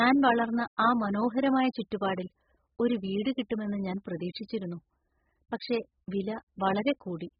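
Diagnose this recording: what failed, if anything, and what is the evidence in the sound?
The damage sits at the codec stage: this speech has the dull, smeared, warbling quality of heavy AAC compression, likely AAC-LC at a very low bitrate, around 8 kbps. Throughout the clip nothing survives above 5.1 kHz. A spectrogram would show a flat ceiling there, with patchy holes and blurred, noise-like fill below it, and sibilants would sound dull and fizzy. The encoder discards and coarsely quantises spectral lines that its hearing model rates least audible.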